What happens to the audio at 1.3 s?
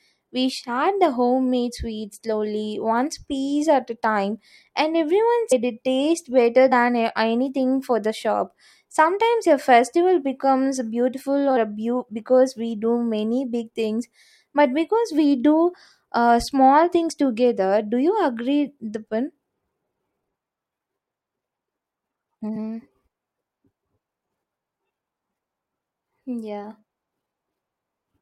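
Nothing goes wrong at 1.3 s; the speech carries on intact through that moment, with no dropout, click or other fault to be heard.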